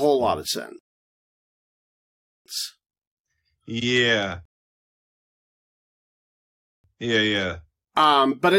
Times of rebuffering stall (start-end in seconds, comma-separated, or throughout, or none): 0.79-2.46, 4.45-6.84